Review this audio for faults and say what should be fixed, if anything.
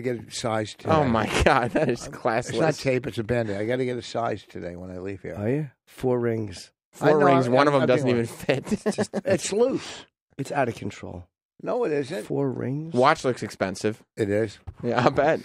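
Faint ticking, ten per second, roughly 40 dB down, runs from 0.39 to 3.49 s: Wi-Fi interference, a radio's 102.4 ms beacon rectified by the circuit. To prevent it, keep phones and Wi-Fi devices away from the recording chain, or switch them off, and use shielded cabling.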